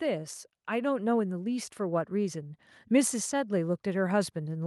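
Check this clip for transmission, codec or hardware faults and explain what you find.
One fault is present. From 0.05 s to the end, automatic gain rising: the gain control judged the input too quiet and kept raising its level, so speech and background noise swell together. The waveform envelope and the spectrogram's noise floor both climb steadily across the clip.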